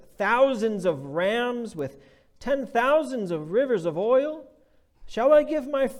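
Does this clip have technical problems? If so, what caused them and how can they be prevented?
Yes: bit error spikes at 1.79 and 5.35 s, each a lone sharp tick from one flipped bit in a single sample. Unlike a dropout click, the sound has no gap. Error-checked links and ECC memory prevent this.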